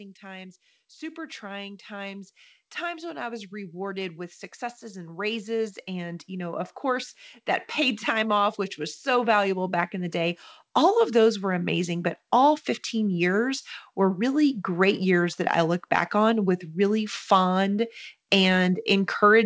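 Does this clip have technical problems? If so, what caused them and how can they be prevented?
Yes. Automatic gain rising: the automatic gain control judged the input too quiet and kept raising its gain from 0.2 s to 12.16 s, by about 18 dB in all, so the speech and the background noise swell louder together across those twelve seconds. Setting a proper microphone level before the call, or limiting how far the gain control may climb, prevents it.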